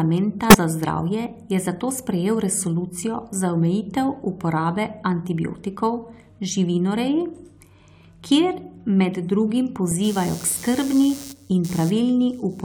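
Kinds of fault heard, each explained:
Compressed frames skipped: Near 0.5 s the speech jumps forward, losing around 20 ms, because whole compressed frames were never played, either missing from the file or rejected by the decoder as damaged. A sample-level dropout or digital edit would leave a hard click; here the jump skips a frame-sized stretch.
Channel delay (comb filtering): From 6.48 to 8.19 s one channel lags the other by about a single sample, and the two are folded to mono. Shared content cancels at regularly spaced frequencies, with the first notch near 20 kHz, so the treble dulls. Because the delay is so short, this sounds like a lost top end, not the swirling hollowness of longer offsets. Unlike a low-pass filter, the change begins and ends abruptly.
Corrupt frame decoded: At 9.91 s one damaged compressed frame was decoded anyway, and misread gains and codes push energy into the wrong frequencies. 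The result is a tiny synthetic blip peaking at about -25 dBFS, lasting only a few milliseconds. Unlike a skipped frame, nothing is lost from the timeline. Something wrong is added instead. Its energy at wrong frequencies sets it apart from the plain broadband tick of a digital click.
Computer activity noise: From 10.04 s to the end, a buzzy pulsing at roughly 150 Hz, about 20 dB under the speech, rides on the audio. Processor and graphics load changes disturb the ground the audio circuit shares with the computer, so the buzz follows the machine's activity, not the speech. Mains hum would hold a steady 50 or 60 Hz with harmonics. This texture is irregular and scratchy and starts partway through.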